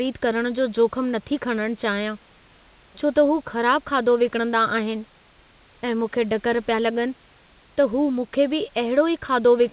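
No technical faults are audible.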